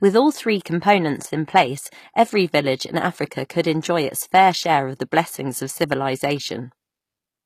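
It's a speech clip with HE-AAC compression damage running the whole way through, and it's plainly audible. The top end sounds synthetic: the s sounds come out gritty and a bit lispy, and nothing comes through above about 14.9 kHz. That's likely HE-AAC at a low bitrate, something around 24 kbps, where only the lower spectrum gets coded and the treble is rebuilt by copying lower bands upward, so the harmonics up there don't quite line up.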